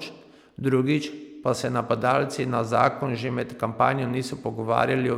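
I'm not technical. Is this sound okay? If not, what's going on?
Yes, this sounds fine.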